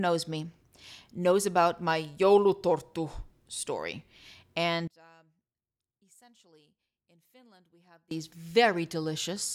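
From 4.88 to 8.11 s the speech collapses by about 29 dB to a faint residue, likely one channel inverted, so the shared centre cancels in mono. Unlike a dropout or plain gain loss, a faint ghost of the sound remains.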